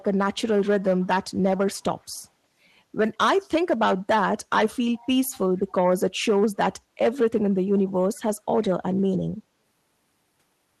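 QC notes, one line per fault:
1.0–1.07 s, 2.0–2.05 s, 4.96–5.07 s, 8.62–8.7 s: echo leak. Brief, faint scraps of the speech return 144 ms late, each lasting 50 to 110 ms and sitting about 30 to 40 dB below the direct speech, loudest in the last two. The constant lag points to one acoustic path. A far end on loudspeaker whose echo canceller let residual pickup through is the likely cause, so fragments slip out in short bursts.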